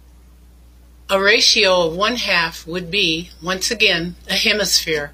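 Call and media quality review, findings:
Adaptive stream at a lower bitrate, 1.42 s to end: abrupt, gapless quality drop; treble turns synthetic, artefacts rise. Player switched renditions after throughput fell, consistent with AAC near 96 kbit/s giving way to HE-AAC near 32 kbit/s with reconstructed highs.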